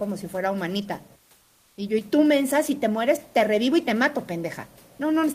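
From 1.43 to 1.77 s, a 340 ms pause, the room noise gives way to comfort noise in place of the background: a steady, featureless hiss about 1 dB quieter, likely from discontinuous transmission filling the gap. A spectrogram shows a smooth, grainless band where the background's fine texture was.

At 1.99 to 2.06 s, one channel drops out for about 70 ms, likely a lost stereo channel before the mono sum. The level falls abruptly by about 6 dB, and the waveform envelope steps down sharply, then recovers.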